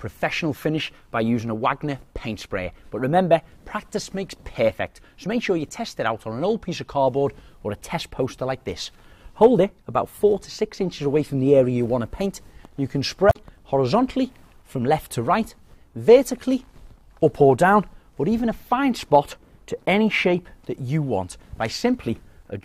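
A brief glitch cuts into the audio from about 13.29 s to 13.36 s, lasting under a tenth of a second. This is damaged data in a compressed stream: corrupted bytes made the decoder misread those frames, lose sync and hunt for the next valid frame header.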